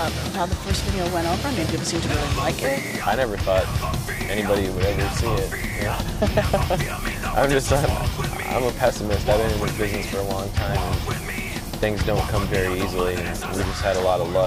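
Small jumps in the sound land at 0.60, 5.76 and 8.96 s, likely a dropped buffer (overrun): a few milliseconds went uncollected and the sides were butted together. On a waveform each shows as a sudden discontinuity, and on a spectrogram as a thin vertical broadband line.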